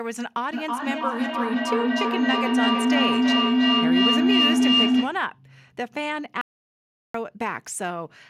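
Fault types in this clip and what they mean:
Feedback howl: 0.53 to 5.27 s, a mic-to-speaker loop gaining level each trip, building to a tone near 300 Hz, pulsing about every 0.3 s, peaking about 8 dB over the speech.
Audio dropout to silence: 6.41 to 7.14 s, sound cuts to total silence for 0.73 s with no room tone, likely from the input being lost while recording continued.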